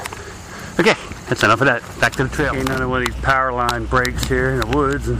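From 2.52 to 2.78 s the processor falls behind its deadlines and misses buffer after buffer, each lasting around a millisecond and a half, with roughly twenty lost and filled with silence. This processor overload crackle sounds like a gritty, tearing burst riding over the audio until the load eases.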